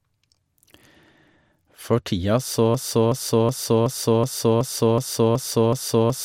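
Speech, with a broken-record loop from 2.75 s to the end. A 0.37 s fragment repeats exactly, back to back, nine times. The player or stream likely stalled and kept resending the last piece it held. The speech after 2.75 s is lost.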